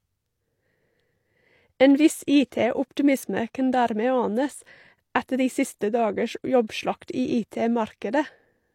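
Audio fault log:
6.67–6.70 s, pre-echo: A short hiss rises just before a sharp onset in the speech. It lasts about 25 ms, then the attack lands soft and smeared. The codec coded this stretch as one transform block. It sized its quantisation noise for the loud onset. That noise spread evenly across the block, so it also filled the quiet moment ahead of the attack. The hiss therefore arrives early, and the onset loses its crisp edge.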